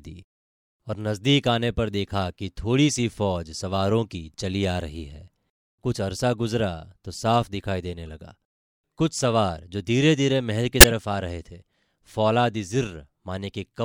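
Speech with two corrupt-frame events decoded: a faint glitch at 8.08 s, pointing to a single damaged frame, and a loud glitch from 10.80 to 10.89 s, consistent with about three consecutive frames. Flipped bits misplaced spectral energy, producing these artifacts.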